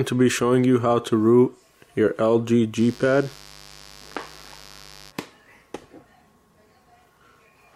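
From 2.75 s to 5.13 s a steady, raspy mains buzz sits roughly 25 dB below the sound. Sharp switching spikes from a dimmer, rectifier or missing shield have leaked in, twice in each 50 Hz cycle, so the energy spreads into harmonics reaching several kilohertz. That bright, rasping edge distinguishes it from plain hum, which stays a smooth, low tone concentrated at 50 or 100 Hz.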